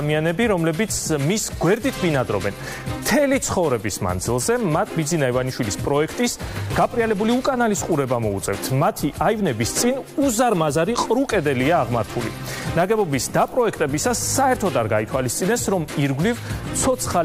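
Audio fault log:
No faults are heard anywhere in this clip. There is nothing to log.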